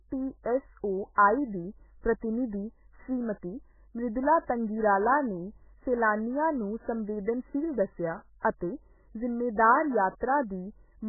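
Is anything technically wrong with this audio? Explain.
Yes, the speech carries MP3 compression damage for its whole length, and it is heavy. Nothing survives above about 2.1 kHz, which points to a very low bitrate, something like 8 kbps. Starved of bits, the encoder likely chopped the treble and dropped weaker frequency lines that flicker between frames, giving a watery, swirly, muffled sound with smeared consonants. A spectrogram would show a flat ceiling at 2.1 kHz and patchy, blocky energy below it.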